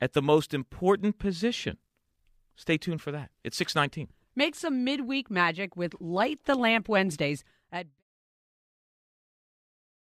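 No technical faults can be heard in this speech recording.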